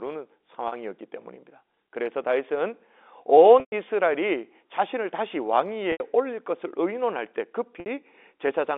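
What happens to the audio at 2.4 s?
Nothing goes wrong at 2.4 s: the speech passes through intact, carrying only the narrow telephone band of G.711 coding, with no dropout, click or distortion at that moment.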